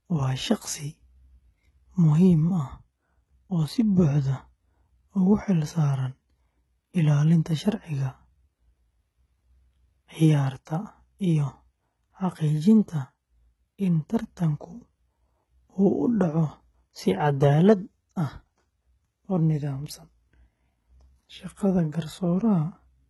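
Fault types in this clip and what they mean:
HE-AAC compression: A likely low-bitrate HE-AAC encode, fitting about 16 kbps, rebuilds the treble from copied lower bands, so the speech sounds heavily processed, gritty and metallic, with nothing above 11.8 kHz.
Audio missing between chunks: The recording was likely handled in 10-second chunks, and a brief sliver of speech is dropped at each join, causing abrupt skips near 5.0 s and 15.0 s.
Pre-echo: The codec spreads quantisation noise across a whole block ahead of a sharp attack, so a hiss of about 16 ms smears in before the onset at 10.65 s.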